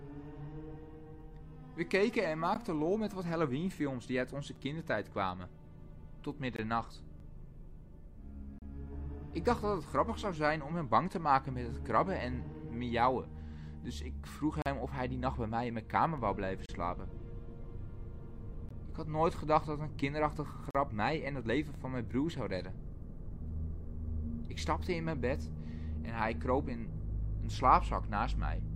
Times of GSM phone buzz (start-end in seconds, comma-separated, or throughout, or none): none